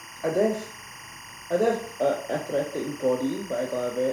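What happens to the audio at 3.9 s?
Timecode bleed runs under the speech here, as throughout the clip. Leaked linear timecode chirps between roughly 1 and 2 kHz, well below the speech.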